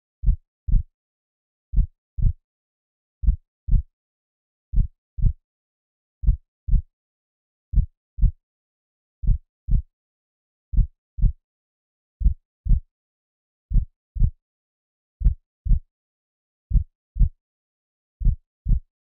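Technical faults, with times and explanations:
No technical faults can be heard anywhere in this clip.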